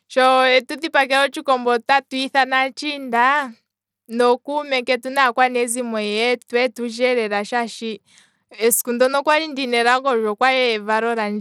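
Throughout, speech sounds gritty, treble flickering under coarse noise: likely Bluetooth SBC compression, its bit budget, fitting about 96 kbps, starving the upper bands.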